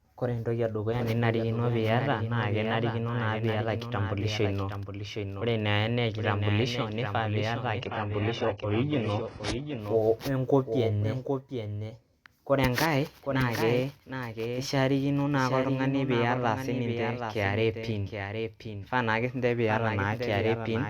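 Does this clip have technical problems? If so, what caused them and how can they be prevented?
Yes. A doubled audio track runs through the whole speech clip: a second full-band copy trails about 0.7 s behind, roughly 5 dB quieter, likely from the same signal being captured twice by a slower path. Unlike room echo, the copy has no decay or reverberant colour. Monitor only one capture route and mute duplicate inputs or loopback paths.

From 7.80 to 9.80 s, just after "kitambulisho nifaa piyata", the adaptive stream drops to a lower bitrate. The treble above 11 kHz vanishes, codec artefacts thicken, and then quality snaps back. This fits a temporary switch to a heavily compressed low-bitrate rendition. There is no gap, which distinguishes it from a dropout. A steadier connection or a larger playback buffer would keep the stream on its higher-quality version.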